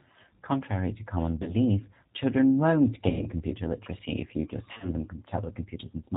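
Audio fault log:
Throughout, G.729 codec: the speech sits on an 8 kbit/s G.729A path, so everything above 4 kHz is gone and the voice is rebuilt from a vocal tract filter plus a few pulses per frame. That's where the plainly audible rough, slightly synthetic edge comes from.
1.43–1.55 s, 3.09–3.26 s and 4.73–4.93 s, VoIP packet loss concealed by the speech codec: the decoder fills the gaps by stretching its last pitch and filter into a fading buzz or coloured noise. The middle dropout is the longest, which fits about 110 ms of missing audio. The last one is several short gaps spread across about 100 ms, and the recovery after each still sounds weak for a moment.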